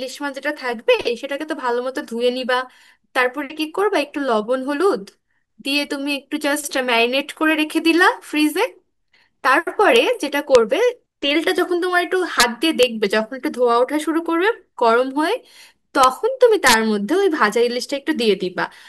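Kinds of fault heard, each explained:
Integer overflow: speech peaks exceed the largest representable integer and wrap to the opposite sign instead of being limited, giving sharp cracks harsher than clipping at 9.96, 10.55, 12.40–12.43, 12.83, 16.04 and 16.67–16.74 s, the two longer bursts overdriven by about 2 dB.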